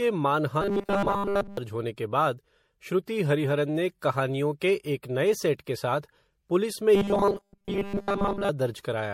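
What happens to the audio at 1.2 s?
At 1.2 s the speech is in the middle of a stretch of robotic sound from repeated short buffers, running from 0.61 s to 1.57 s. The voice becomes a rigid, metallic buzz at 200 Hz that roughly tracks the syllables. This is likely caused by new audio arriving too late, so playback fills the gap by looping the last chunk. A 200 Hz buzz points to a repeat of about 5 ms. Most of the underlying speech in this span is skipped rather than heard.

Throughout the clip, and so also at 1.2 s, there is generation loss. The audio sounds swirly, hollow and smeared, and consonant onsets are blurred. The likely cause is MP3 coding at 64 kbit/s repeated several times. Each pass re-quantises on a shifted frame grid, so the noise and spectral holes build up beyond what a single encode at that bitrate would produce.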